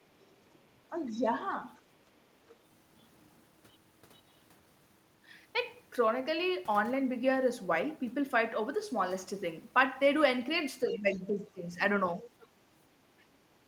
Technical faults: speech suppressed in double talk; other side's voice leaking through; background gated by the echo canceller

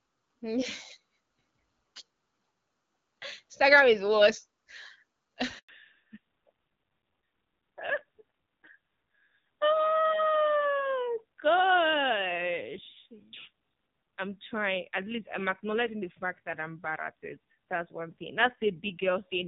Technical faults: handover gap; fallback to narrowband

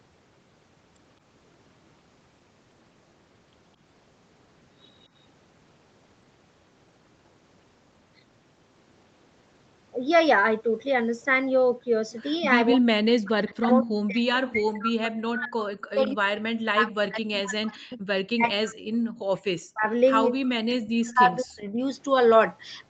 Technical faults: speech suppressed in double talk; echo leak

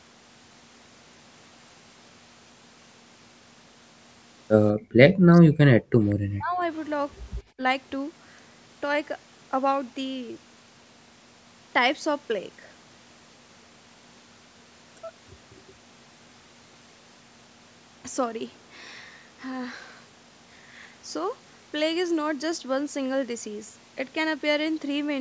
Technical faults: background gated by the echo canceller; speech suppressed in double talk; echo leak

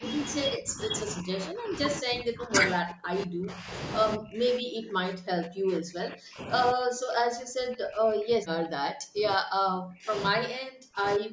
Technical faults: speech suppressed in double talk

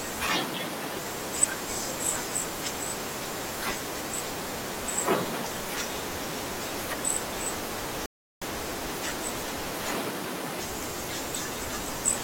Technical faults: rebuffering stall

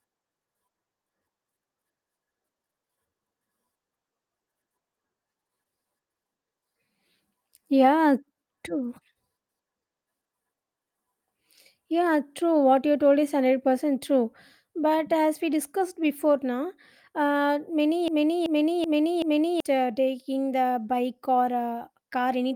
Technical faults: broken-record loop

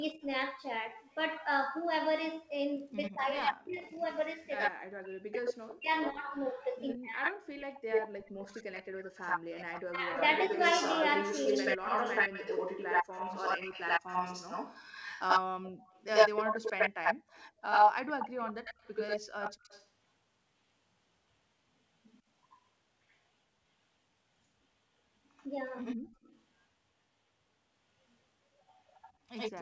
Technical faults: echo leak; speech suppressed in double talk; background gated by the echo canceller

